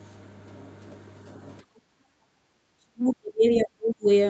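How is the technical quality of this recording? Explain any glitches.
Two glitches stand out in this speech, heard through a call path whose sound stops at 8 kHz. From 1.63 to 2.37 s, the background is gated by the echo canceller. It clamps the microphone while the loudspeaker plays, so the room sound drops by about 21 dB. From 2.65 to 4.08 s, the speech fades and breaks up in pieces, dipping by roughly 40 dB. The likely cause is speech suppressed in double talk. Both sides overlap, and the canceller mistakes this talker for echo.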